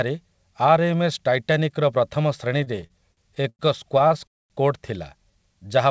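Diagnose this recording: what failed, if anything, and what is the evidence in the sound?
The network delivered packets late and unevenly, so the receiver's jitter buffer kept running dry, producing repeated stalls (stutter) between 2.58 and 3.61 s. Across that span the speech halts about ten times, with concealment filling roughly 271 ms, about a quarter of the stretch. The longest hold lasts 97 ms. The receiver extended each last sound until data arrived, so nothing is lost, but the speech drags and judders through that second.

A single late packet at 4.08 to 4.12 s caused a short stall. The network delay jumped by 25 ms, the jitter buffer emptied, and the receiver stretched the preceding sound to cover the wait. It then resumed exactly where it left off, so the speech shows one briefly held moment with a faint buzzy dip rather than any dropped material.

From 4.27 to 4.52 s the audio stops dead for 230 ms of silence and then picks up where it stopped, matching a call audio freeze. 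The likely cause is packets held up in the network for that long, draining the jitter buffer so the concealed tail faded fully to silence. No speech is missing, but a clear gap is inserted. The G.722 call path itself, with nothing above 8 kHz, is working as designed.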